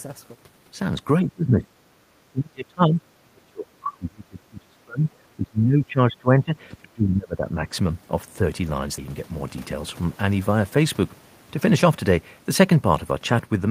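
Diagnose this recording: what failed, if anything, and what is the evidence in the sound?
The speech itself dips hard at 1.23–1.67 s, 2.27–5.07 s, 5.37–6.54 s and 6.81–7.65 s, falling by roughly 20 dB and nearer 30 dB in the longest stretch. This is likely speech suppressed in double talk, a call-processing failure: with both ends talking, the echo canceller could not separate the near talker from loudspeaker echo and attenuated everything.

At 1.95–1.99 s the room tone drops by about 13 dB for roughly 40 ms and then returns. This is background gated by the echo canceller, again in call processing: while the loudspeaker path was active, the canceller clamped the microphone down, taking the ambience with it. What separates it from the double-talk suppression is that it falls between the speech dips, hits the background rather than the talker, and lasts only a moment.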